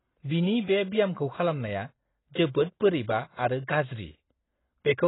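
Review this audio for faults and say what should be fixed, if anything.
Heavy AAC compression damage runs through the whole speech clip. Nothing survives above about 3.9 kHz, so sibilants lose their edge and the sound is dull. Within that band, sustained sounds warble and the consonants take on a smeared, fizzy texture. That pattern is likely the result of AAC-LC starving its quantiser: too few bits per frame forces a low cut-off and coarse, gappy spectral coding, which fits a bitrate of around 16 kbps. To prevent it, encode from the original source at a substantially higher bitrate, or keep an uncompressed master and avoid low-rate intermediate encodes.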